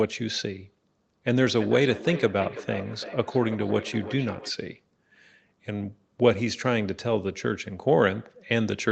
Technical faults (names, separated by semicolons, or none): feedback echo between two devices